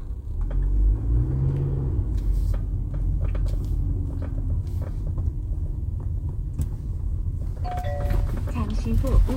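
No technical faults are audible anywhere in this audio.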